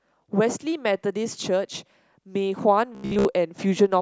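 Robotic sound from repeated short buffers runs from 2.95 to 3.25 s in this speech, turning it into a rigid metallic buzz near 67 Hz. The likely cause is audio arriving too late, with a buffer of about 15 ms replayed over most of that stretch.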